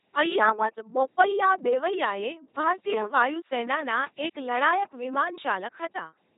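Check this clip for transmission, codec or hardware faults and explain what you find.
The speech has passed through a very low-rate vocoder, and the damage is heavy.

LPC-10 vocoder, throughout the clip: rather than sending the waveform, the coder sends a short-term filter shape, a pitch, a gain and a switch for each frame. That switch chooses either a pulse train or noise as the excitation, which fits a 2.4 kbit/s LPC-10 stream. The result is a buzzing, mechanical robot voice. Mistaken voicing calls leave buzzes or hiss, and nothing is left above 3.8 kHz.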